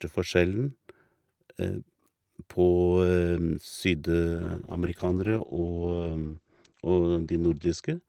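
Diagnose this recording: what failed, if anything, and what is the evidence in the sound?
A call bitrate drop hits the codec stage at 4.34 s and lasts to 8.07 s, the end of the clip. Before it, the speech is full-band. After it, content above 8 kHz vanishes and the sound turns coarse and watery. The network's bandwidth estimate fell, so the encoder cut from 48 kbps to 10 kbps. It stays at that floor for 3.35 s. At this rate the codec quantises roughly and trims the top band. It never recovers.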